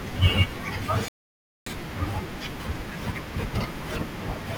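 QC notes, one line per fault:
1.08–1.66 s, rebuffering stall: the speech stops dead into silence for about 0.58 s, then carries on from the exact point where it broke off. The player has run dry of downloaded audio and waits for more before continuing. What separates this from a dropout or packet loss is that nothing goes missing. No syllable is clipped or skipped across the gap. The pause is simply inserted, stretching the timeline by that half-second.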